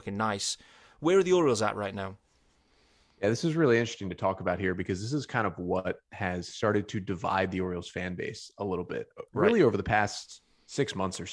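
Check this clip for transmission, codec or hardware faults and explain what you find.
No transmission, codec or hardware fault can be heard anywhere in the speech recording, and the signal stays continuous and steady throughout.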